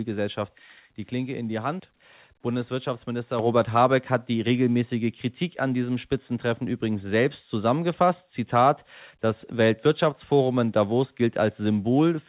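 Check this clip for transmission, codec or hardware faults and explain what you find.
One hardware-side fault stands out. At 3.39 s the speech and background noise jump together by about 6 dB: a microphone volume stepped up, as the call software raised the device's input gain in one step. The narrow telephone band, with nothing above 4 kHz, fits the G.711 A-law call path at 64 kbps.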